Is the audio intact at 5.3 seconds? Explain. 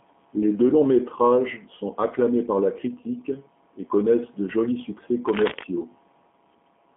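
No. Just after "connaissent de jolis succès", from 5.27 to 5.64 s, there is cable scratch noise: dense, uneven rustling bursts only a little quieter than the speech. The likely cause is a worn cable or connector being moved, its contact resistance fluctuating. Unlike isolated clicks or vinyl crackle, it forms a dense scratchy texture. Underneath, as throughout, runs G.729 codec damage. Nothing passes above 3.7 kHz, and the speech has a rough, synthetic quality that fits 8 kbit/s model-based coding rather than a simple low-pass filter.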